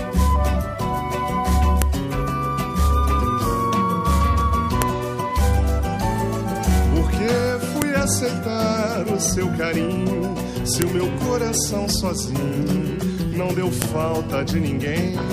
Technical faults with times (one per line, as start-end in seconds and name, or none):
1.82 file header played as audio
4.82 file header played as audio
7.82 file header played as audio
10.82 file header played as audio
13.82 file header played as audio